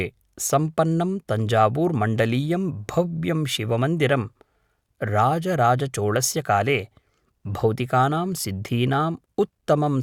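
Speech with no audible faults.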